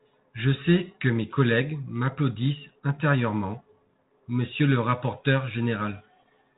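The clip is speech, and nothing is technically wrong with it.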